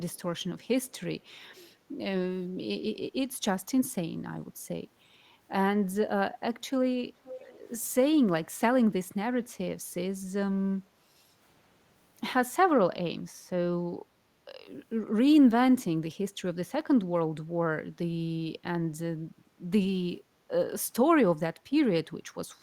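Echo leak appears at 0.15–0.22, 0.59–0.64 and 0.85–0.92 s as very faint scraps, far below the speech, repeating it about 482 ms late. At 7.24–7.58 s a much louder copy returns about 514 ms behind the original. The likely cause is a far end playing the call through a loudspeaker, where the echo canceller failed to remove what its microphone picked up, so a delayed copy was sent back.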